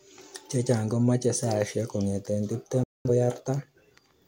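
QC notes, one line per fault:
2.83 to 3.10 s, digital broadcast dropout: the speech snaps to silence with a very quick 3 ms fade, leaving a hole of about 213 ms before the programme picks up again. That fits the receiver muting on roughly five bad frames, so whatever was sent in that gap is gone.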